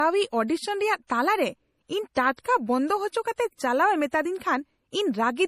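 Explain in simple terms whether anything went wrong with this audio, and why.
Something did go wrong here, and it runs through the whole clip: the speech has that smeared, swirly quality and nothing at all above 15 kHz. That's most likely low-bitrate audio saved at a high bitrate, where a roughly squeezed MP3 was re-saved bigger but couldn't get its lost detail back.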